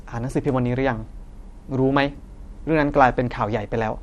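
From start to finish, the speech shows damage that likely comes from MP2 compression at a starved bitrate, one that fits roughly 80 kbps. Upper sub-bands drop out and return while the rest are coarsely quantised, so the sound is dull, gurgling and granular throughout.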